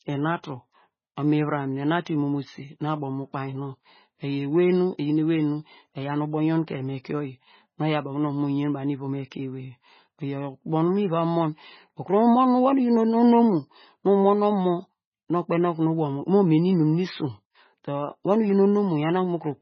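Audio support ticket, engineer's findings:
Likely MP3 compression at a very low bitrate, sound pointing to around 16 kbps, heavy codec damage. Encoder starved of bits: treble cut flat, nothing above 6.5 kHz; weak frequency lines dropped and restored frame to frame. Result, throughout the speech: dull top, watery swirl, metallic chirp on s sounds, smeared onsets.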